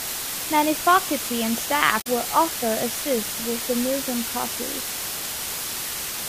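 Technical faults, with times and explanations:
Throughout, low bit depth with dither: the speech is rounded to only 5 bits after dither is added, so the error becomes a steady, even hiss nearly as loud as the speech.
1.97–2.07 s, damaged data in a compressed stream: corrupted frames after "faculty and" make the decoder lose sync and hunt for a header, giving a brief glitch before "will also assist with".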